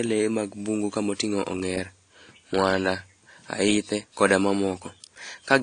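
From start to finish the speech carries transcoding between lossy codecs, likely an AAC-LC stream at 32 kbit/s re-encoded as WMA 1 at 64 kbit/s. Nothing remains above 10 kHz. The first codec's smearing and swirl are layered with the second's own coding noise.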